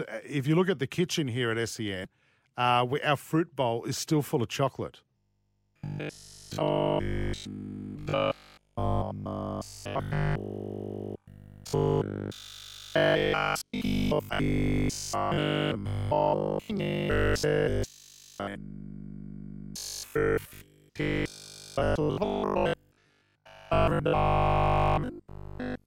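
After "still full of chocolate" at 5.17 s, the speech has a robotic sound until 25.85 s: a rigid 50 Hz buzz, likely from repeated short 20 ms buffers.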